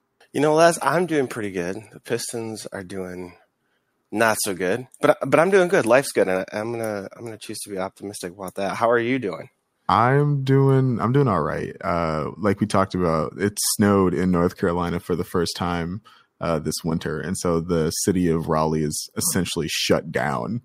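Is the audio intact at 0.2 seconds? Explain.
Yes, at 0.2 seconds the audio plays through cleanly, with no dropout, click, distortion or other fault.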